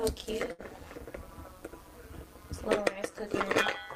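Right from the start, and for the whole clip, there's overlap-add ripple. The audio was chopped into windowed frames and stitched back together with an overlap that doesn't add up to a steady gain, so the level swings by about 11 dB once per frame, somewhere around 200 times a second. At that rate you don't hear it as a slow pulse. It comes across as a metallic buzz, with extra tones around each note, over everything.

Then from about 0.51 to 0.62 s there's a burst of packet loss, a run of audio that never got to the player in time. The receiver papered over it by stretching the last sound it had for roughly 71 ms, turning it down as it went, so you get a smeared, fading tail instead of real signal. When playback picks up again it has jumped ahead, and about 80 ms of the original is simply gone.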